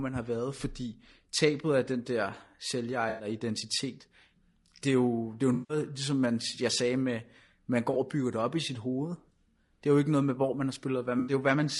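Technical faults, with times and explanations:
Throughout, low-delay AAC compression: the speech sounds rough and grainy, with noise filling the gaps between harmonics and a thin, synthetic-sounding top band. It is likely AAC-ELD at about 32 kbps, whose short frames resolve pitch poorly; a spectrogram shows smeared harmonics and patchy high frequencies.
3.09 to 3.27 s, 5.53 to 5.77 s (after "jo det er jo", before "ligesom man jeg sagde"), 7.93 s (after "jeg sagde med man", before "og bygger det op") and 11.19 to 11.33 s (after "med hvor man har"), AAC frame loss with concealment: gaps of 100, 160, 20 and 80 ms were patched by the decoder from earlier spectrum, giving smeared, phasey, noisy blips. A spectrogram shows blurred, frozen-looking bands there, and the waveform shows an unnatural envelope in each patch.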